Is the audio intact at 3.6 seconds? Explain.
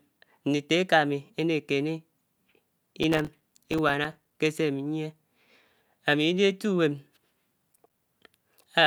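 No. At 3.6 seconds the speech is inside a burst of processor overload crackle running from 3.03 to 4.35 s. The processor keeps missing deadlines for buffers of a few milliseconds. Dozens of tiny silent gaps with hard edges tear through the sound as gritty crackle.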